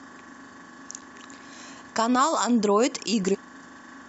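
Speech with two short bursts of damaged data in a compressed stream, at 0.98 to 1.03 s and again at 3.31 to 3.35 s. At each, corrupted bytes make the decoder misread frames and lose sync, giving a brief glitch heard as a chirp, squawk, click or short hole.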